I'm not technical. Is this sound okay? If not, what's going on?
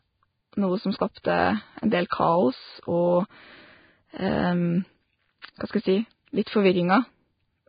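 No. This speech was most likely squeezed hard by a Vorbis compression setting, which stores the sound very roughly to save space. Nothing above about 4.9 kHz survives, so it sounds dull and muffled, and the fine detail that remains comes out hissy and grainy, giving the whole recording a rough, gritty texture from start to finish.

Because that compression works on short chunks of sound at a time, sudden sharp sounds cause pre-echo: the noise meant for the loud moment leaks into the quiet instant just before it. You can hear a brief hiss or smear ahead of the attack at 1.22, 2.10, 5.42 and 6.44 seconds, each lasting roughly 15 to 30 thousandths of a second, making those starts sound soft.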